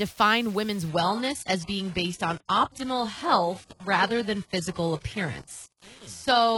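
From the start, the speech carries a grainy, signal-following distortion, with the quietest passages sputtering or dropping to silence. This is low bit depth without dither, likely from rounding to about 7 bits, leaving error roughly 25 dB below the signal. The waveform shows visible stair-steps.

At 0.89 s the quality drops abruptly, without a gap, and stays degraded to the end: the treble thins and turns synthetic. An adaptive stream has switched to a lower bitrate, which fits a move from mid-rate AAC to very low-rate HE-AAC. The spectrogram shows a hard ceiling at 11.5 kHz from that point.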